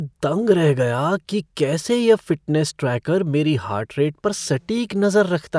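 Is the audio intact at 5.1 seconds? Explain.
Yes, the speech at 5.1 seconds plays through intact, with no audible dropout, click, distortion or other fault at that moment.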